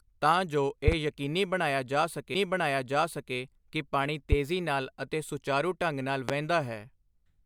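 Loud pops hit this speech recording at 0.88–0.95 s (a quick double), at 4.32–4.35 s between "ਕਿ ਪਾਣੀ" and "ਨਾਲ ਅਤੇ ਸੁਚਾਰੂ ਢੰਗ", and at 6.29–6.31 s after "ਅਤੇ ਸੁਚਾਰੂ ਢੰਗ ਨਾਲ". Each sharp thump stands roughly 20 dB above the speech, which continues underneath. A sudden voltage pulse from a connector, switch or static discharge is the likely cause.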